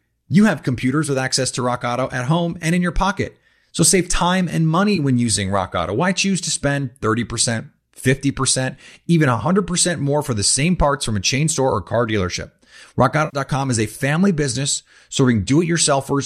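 AAC frame loss with concealment occurs at 4.96–4.99 s and 13.25–13.37 s. The decoder bridged missing frames, about 20 ms and then 80 ms, from the last good spectrum, leaving a brief smeared, phasey patch and then a longer noisy blur. The 10 ms loss steps likely reflect low-delay AAC coding.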